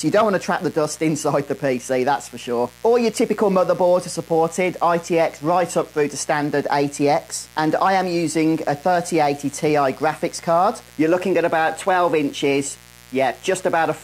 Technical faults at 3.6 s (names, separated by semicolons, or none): mains buzz